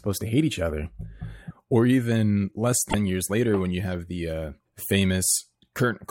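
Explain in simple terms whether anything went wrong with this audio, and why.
Damaged data in a compressed stream: between 2.86 and 2.94 s, part of the compressed speech was corrupted, so the decoder misread those frames and briefly lost its place while it searched for the next clean one. You hear a short, sharp chirp or blip there.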